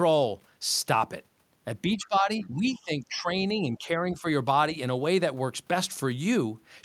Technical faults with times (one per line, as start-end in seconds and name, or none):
1.88-4.25 speech suppressed in double talk
2.42-2.48 other side's voice leaking through